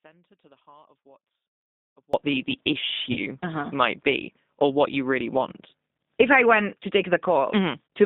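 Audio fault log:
throughout G.729 codec: the speech sounds narrow, slightly rough and synthetic, with nothing above about 3.7 kHz and little below 200 Hz. This points to G.729 at 8 kbit/s, which rebuilds each short frame from a vocal tract filter, a pitch predictor and a few pulses, so fine detail is lost.
0.00–2.14 s audio dropout to a faint residue: the clip opens with the speech already gone, leaving only a faint sound about 30 dB below normal level, and then the speech cuts back in abruptly. The likely cause is that the signal was lost while the path after the break stayed live.
3.12–3.20 s VoIP packet loss concealed by the speech codec: the speech is briefly stretched into a fading, artificial sound and then recovers. About 40 ms of audio was lost, which fits two packets. The decoder filled the gap by extending its last pitch and filter at falling gain, and the error carried into the frames that followed.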